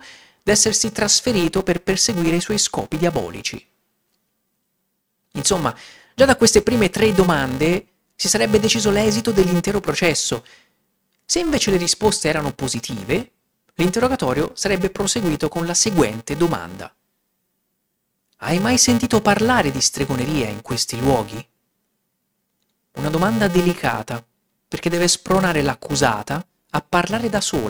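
Speech clip with a buzz near 345 Hz throughout: a filter restarted on every block, fitting a 128-sample block, resets to silence each block and leaves a small transient. Unlike mains hum, the buzz rises and falls with the speech level and fades in pauses.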